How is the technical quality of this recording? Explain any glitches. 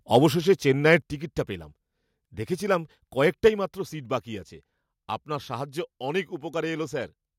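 The recording has a couple of level problems, all tied to the microphone's input gain.

From 0.88 to 0.95 s, just before "টিকিটটা পেলাম", there's a short burst of microphone overload. The loudest peak gets flattened, sitting about 1 dB past the converter's ceiling on a small share of samples. That gives it a brief harsh crackle, likely from the input volume being set too high.

Right after that, at 1.02 s, the level drops suddenly by about 6 dB, and it drops again by about 4 dB at 3.48 s, just before "মাত্র সিট বাকি আছে". Both times the speech and the background fall together in a single step. That points to the microphone volume being stepped down, most likely by the call software reacting to the overload.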